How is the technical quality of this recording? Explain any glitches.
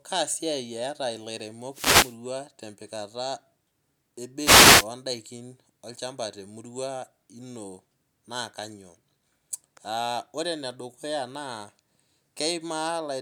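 The recording has two wireless microphone noise hits, both short. The first runs from about 1.71 to 2.17 s and the second from 4.39 to 4.87 s, each roughly half a second. What's going on is the analogue FM link from the mic fading as reflected copies of the radio signal cancel each other. The receiver's noise climbs, so you hear a quick swish of static.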